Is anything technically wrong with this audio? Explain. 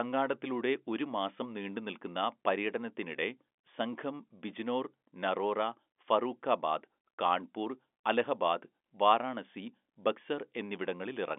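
No, nothing in this speech clip points to a technical fault. It carries the narrow band of ordinary G.711 telephone coding, with the sound confined to roughly 250 Hz to 3.5 kHz and nothing above about 3.7 kHz, which fits a 64 kbps mu-law line.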